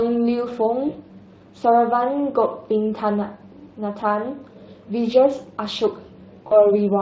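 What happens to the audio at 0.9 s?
VoIP packet loss concealed by the speech codec hits from 0.89 to 0.98 s. About 60 ms went missing, which fits three lost 20 ms frames, and the decoder extended its last pitch and filter at falling gain, producing a brief buzzy or noise-like, fading smear.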